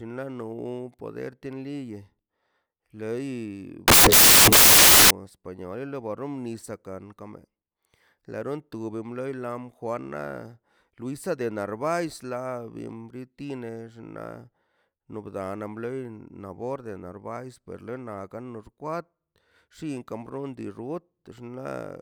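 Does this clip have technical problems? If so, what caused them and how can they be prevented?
Yes. From 3.88 to 5.10 s the speech turns into loud, harsh broadband noise: samples built from the wrong bytes, low bits read as high. Prevention: check byte order and alignment when parsing.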